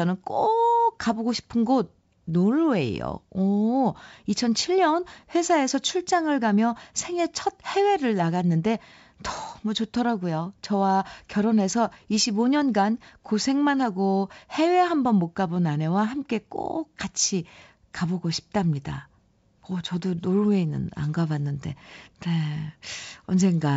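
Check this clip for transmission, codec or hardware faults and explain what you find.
No faults detected here.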